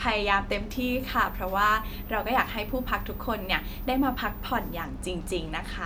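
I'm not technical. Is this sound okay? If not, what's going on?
No. From about 0.70 s to 4.84 s, a thin, very high whistle sits behind the speech, close to 15 kHz. This is a switching supply whistle: a switching power supply is running in an audible burst mode or beating with another one. Unlike mains hum, which is low and steady, this tone is shrill, and it wanders slightly in pitch, between about 14.5 and 15 kHz.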